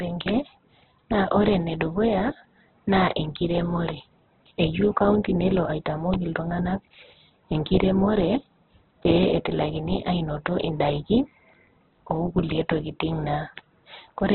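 Speech, cut off throughout above 4.2 kHz, with a rough, grainy, noise-filled texture. This is likely Opus compression starved of bits, fitting a rate of around 8 kbps.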